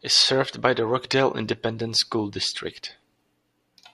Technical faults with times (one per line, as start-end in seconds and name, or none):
none